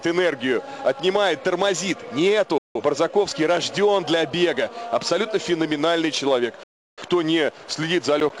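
At 2.58 s the sound fades out within 3 ms and stays silent until 2.81 s. This is a digital broadcast dropout. The receiver stopped getting good frames and muted. A second, longer hole runs from 6.63 to 7.02 s. The missing sound never returns.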